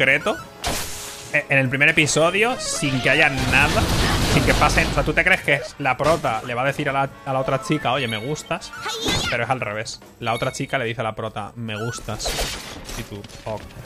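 No dropouts, clicks, distortion or timing errors can be heard anywhere in the recording.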